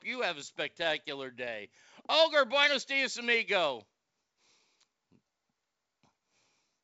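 Speech, carried over G.722 wideband telephone coding with nothing audible above about 7.7 kHz, and nothing is technically wrong with it.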